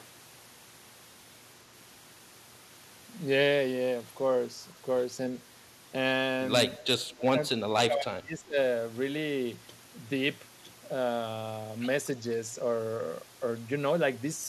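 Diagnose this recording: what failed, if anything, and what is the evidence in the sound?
The speech sinks by roughly 25 dB from 7.16 to 7.43 s and again from 7.66 to 8.57 s. This is speech suppressed in double talk at the call-processing stage: the echo canceller likely could not separate the near-end talker from the overlapping loudspeaker echo and attenuated both.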